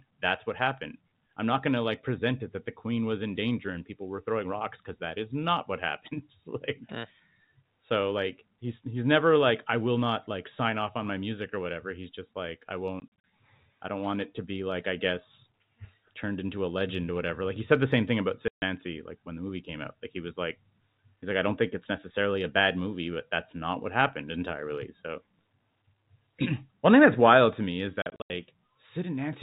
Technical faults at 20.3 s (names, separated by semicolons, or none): none